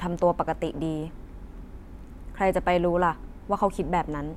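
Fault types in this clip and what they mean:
No technical fault can be heard anywhere in this speech recording. There is nothing to list against any point in it.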